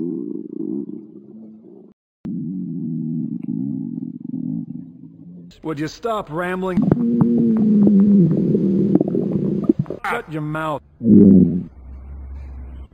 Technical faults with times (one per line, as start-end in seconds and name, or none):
0.00-12.93 imaging from linear upsampling